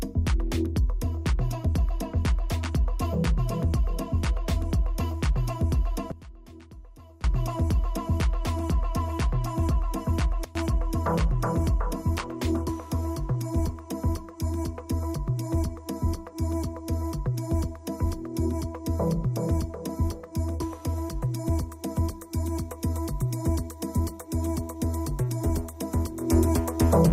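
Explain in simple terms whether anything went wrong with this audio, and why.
Something did go wrong. There are three sudden gain jumps. At 6.12 s the sound drops sharply in volume and stays quiet until 7.24 s. At 10.44 s it drops again, briefly, until 10.55 s. From 26.21 s to the end it gets suddenly louder. The background noise jumps along with the sound each time. That points to a volume setting that was likely changed instantly instead of being faded smoothly.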